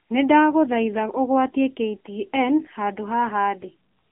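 The AMR narrowband mobile codec colours the whole clip, from start to finish. The speech sits in a telephone band of roughly 300 Hz to 3.5 kHz. Nothing above 3.5 kHz survives, so sibilants sound dull and clipped. The codec rebuilds the voice from a vocal-tract model fed by sparse pulses. That gives a plainly audible buzzy, synthetic edge. The coarseness fits a low mobile rate around 7.95 kbps.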